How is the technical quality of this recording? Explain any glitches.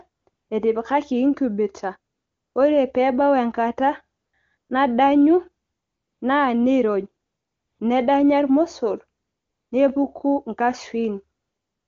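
The recording carries wideband phone-call audio, clear enough to point to the top AMR-WB rate, but its pauses repeatedly drop to AMR comfort noise.

AMR comfort noise appears nine times between 0.09 s and 11.88 s, in gaps lasting 120 to 560 ms, the longest at 5.65 to 6.21 s. In each gap the phone decided nobody was talking and stopped sending speech, so the receiver generated a smooth, steady hiss from a rough level-and-spectrum sketch. That substitute replaces the real room sound and switches audibly on and off around phrases.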